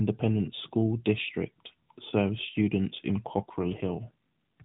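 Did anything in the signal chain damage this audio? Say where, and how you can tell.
Yes. The network side of the mobile link stepped the AMR codec down mid-call, an AMR rate drop, from 3.26 to 4.11 s. The speech stays narrowband throughout, with nothing above 4 kHz, and that band doesn't change and no gap opens. Over that stretch the speech turns buzzier and more synthetic, which fits a switch from the 12.2 kbps mode to about 5.9 kbps. With fewer bits for the excitation pulses, the vocal-tract model sounds coarser until the rate recovers.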